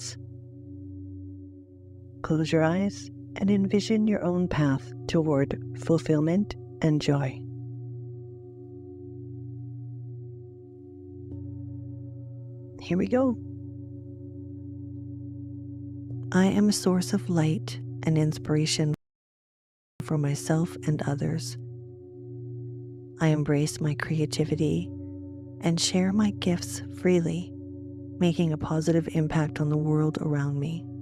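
At 18.94 s the audio stops dead and falls silent. This is a rebuffering stall. The player used up the audio it had downloaded and had to wait for more to arrive. The gap lasts about 1.06 s, until 20.00 s. Then the sound picks up exactly where it left off. Nothing is skipped or repeated. The stall only adds time, so the clip runs about a second longer than its content.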